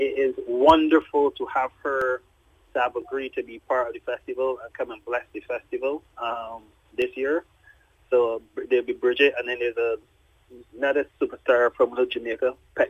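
From 1.02 s to 7.02 s the audio carries periodic USB or driver dropouts: about seven brief gaps, spaced exactly 1.0 s apart. At each one, around a millisecond of signal is lost and replaced by silence, as something stalls the audio path on a fixed schedule. Each gap sounds like a small tick that is audible only while sound is present. Unlike random clicks or network packet loss, the strict one-second rhythm points to a recurring system task.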